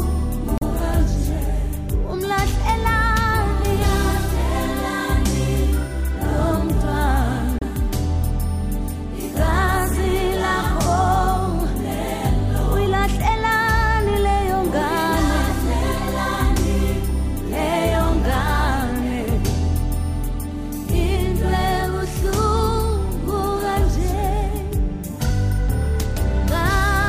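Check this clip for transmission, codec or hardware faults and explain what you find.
There are two short glitches, both from damaged data in a compressed stream. They show up at 0.56 to 0.63 s and again at 7.59 to 7.63 s, each a brief blip under a tenth of a second. In both spots bytes of the encoded stream were lost or corrupted. The decoder either misread those frames or threw them out, lost sync, and had to hunt for the next valid frame header before it could carry on cleanly.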